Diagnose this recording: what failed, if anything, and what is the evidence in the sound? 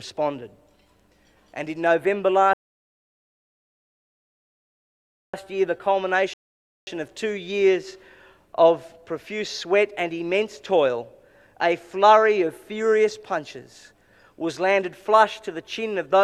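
Playback stalled twice from rebuffering, a network-to-player delivery fault: the sound drops to silence from 2.53 to 5.34 s, adding 2.8 s, then again from 6.34 to 6.87 s, adding 0.54 s. Each time it resumes exactly where it stopped, with nothing skipped. The player's buffer ran dry and waited for more data. On a waveform these are flat silent gaps; on a spectrogram, blank vertical bands with continuous content on either side.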